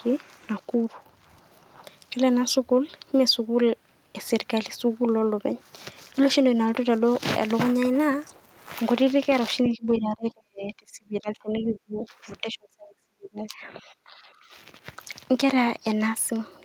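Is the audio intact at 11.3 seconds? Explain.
No, that moment falls inside the speech suppressed in double talk, from 9.69 to 12.07 s: the speech dips by about 30 dB, likely an echo canceller ducking both sides while they overlap.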